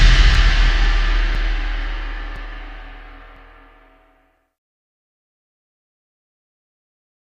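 Something stalled the USB bus or audio driver once a second from 0.35 s to 6.36 s, causing periodic USB or driver dropouts: about seven gaps of a few milliseconds of silence, heard as regular ticks.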